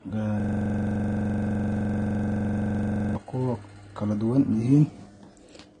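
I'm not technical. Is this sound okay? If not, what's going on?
No. From 0.40 to 3.15 s the speech is replaced by a 43 ms sliver repeating about 23 times a second until "ku kala duwan". This is a system hang loop: the computer froze while the sound hardware kept replaying one small buffer.

Throughout, the speech sounds dull, with nothing above 9.7 kHz, likely from transcoding between lossy codecs, one compressed format converted into another.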